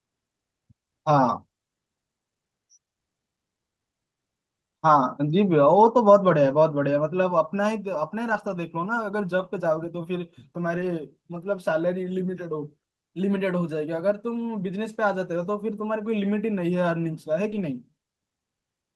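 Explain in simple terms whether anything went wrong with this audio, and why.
A few bits of the call got lost in transit at 6.45, 8.29, 10.77 and 17.51 s. Each time, a lost packet was rebuilt from error correction, so there's no gap, just a brief rougher, noisier blip.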